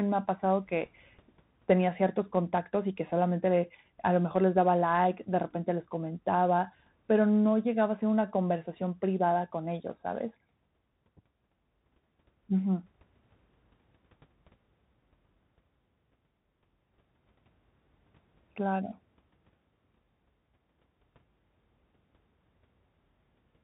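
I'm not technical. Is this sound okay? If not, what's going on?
No. The whole clip went through a Bluetooth CVSD headset codec. It cuts everything above 4 kHz, so the speech sounds muffled, with scratchy s sounds and a grainy hiss.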